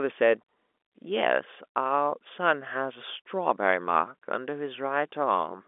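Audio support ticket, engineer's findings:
No fault found: speech passes through G.711 telephone coding as expected, with the line band running about 250 Hz to 3.5 kHz and nothing audible above 3.7 kHz.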